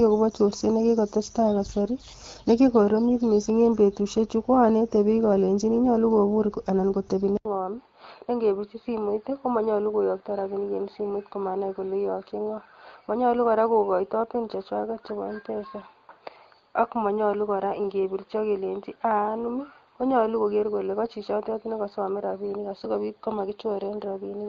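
At 7.37 s, just after "alenyini nyolu kobur kitebi", the speech drops out for about 80 ms and resumes duller and boxier, about 5 dB quieter, with nothing above 4.7 kHz and a new noise floor roughly 45 dB down. This most likely marks an input switched to a poorer device, and it holds to the end. Unlike a filter or a codec change, the tone, level and background noise all change together, with a brief gap at the switch, as when another microphone takes over.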